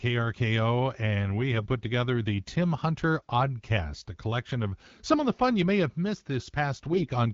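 AMR bit errors at 1.52 to 1.68 s, between "and we" and "put together the", and again at 6.91 to 7.10 s: roughly 4 percent of the less-protected bits arrive flipped, misplacing excitation pulses and skewing fine pitch, gain and spectrum values, so the speech briefly turns hoarse, scratchy and gargly.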